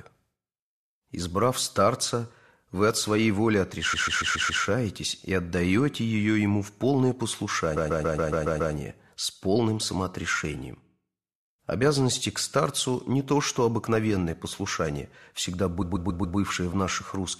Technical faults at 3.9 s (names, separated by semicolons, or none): repeated frames